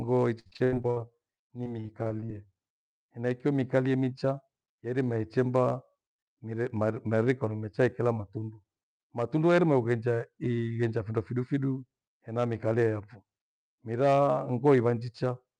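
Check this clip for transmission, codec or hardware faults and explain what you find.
Yes, there are transmission faults here: two bursts of packet loss early in the speech, a jitter buffer slow-down overlapping them, and three later jitter buffer speed-ups.

Repeated packet loss (robotic sound) runs from 0.39 to 0.98 s and again from 1.36 to 2.30 s. The first burst has 8 gaps totalling 280 ms, the longest 86 ms, with 55% of that stretch concealed. The second has 9 shorter gaps totalling 120 ms, the longest 46 ms, with 23% concealed. The receiver fills each hole by extending the last received sound, so the speech turns choppy rather than dropping to silence. That filling is what separates it from plain dropouts.

A jitter buffer slow-down runs from 0.88 to 1.69 s, overlapping the loss. To rebuild its reserve, the receiver repeated pitch periods and inserted 95 ms in total, so playback ran at 89% speed. 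The speech sounds drawn out, but its pitch stays where it was. A drifting clock or a tape-style drag would lower the pitch along with the speed.

Jitter buffer speed-ups occur at 3.54 to 4.98 s (105% speed, around 70 ms removed), 6.00 to 6.53 s (108%, around 50 ms) and 14.76 to 15.09 s (110%, around 40 ms). Here the receiver trimmed short pitch-period pieces to shed excess delay. The speech sounds hurried at unchanged pitch. Unlike packet loss, there are no audible holes or metallic fill.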